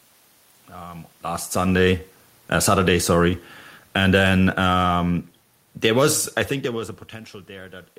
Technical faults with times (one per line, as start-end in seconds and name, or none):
2.53-6.93 automatic gain falling